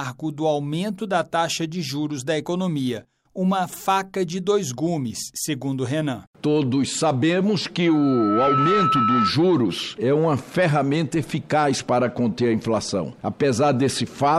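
At 7.86 s a single piercing tone near 1.3 kHz appears and swells over a little under a second into a steady squeal that sits a few decibels above the rest of the sound, before cutting off at 9.33 s. This is loudspeaker feedback squeal: the microphone picked up the loudspeaker it was feeding, and at 1.3 kHz the loop gain rose above one, so that frequency fed on itself and grew.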